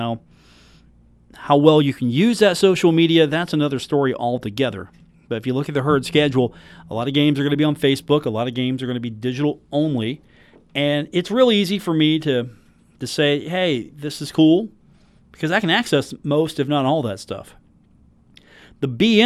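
No technical faults can be heard anywhere in this speech recording. Nothing in the sound points to a problem in the chain that captured or delivered it.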